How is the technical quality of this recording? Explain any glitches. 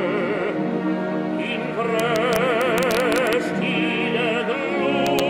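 The recording has integer overflow glitches in two places. Integer overflow runs from 2.00 to 3.33 s, with peaks driven about 2 dB past the limit, and again from 5.07 to 5.20 s, right at the limit. Samples passing the largest integer wrap to the opposite sign instead of being limited, producing sharp cracks on peaks.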